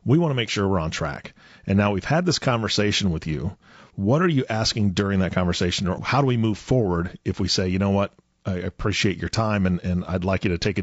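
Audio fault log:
throughout, low-delay AAC compression: the speech sounds rough and grainy, with noise between harmonics, likely from short-frame AAC-ELD coding at a rate fitting about 32 kbps.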